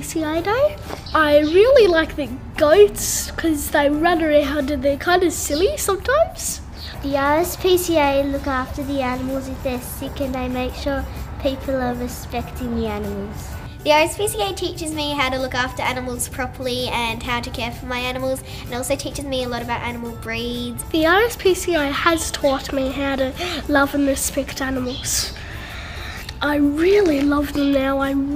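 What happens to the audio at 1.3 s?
At 1.3 s the audio plays through intact, with no dropout, click, distortion or other fault at that moment.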